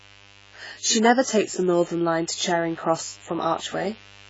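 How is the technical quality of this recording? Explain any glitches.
The recording is technically poor, with two faults running through the whole speech clip.

Mains buzz, throughout: spikes from the 50 Hz supply leak into the signal path, adding a steady raspy buzz of stacked harmonics roughly 30 dB below the speech.

AAC compression, throughout: the likely cause is a heavily compressed AAC-LC encode at a very low bitrate, near 16 kbps. Nothing survives above 7.6 kHz, leaving the speech dull and smeared.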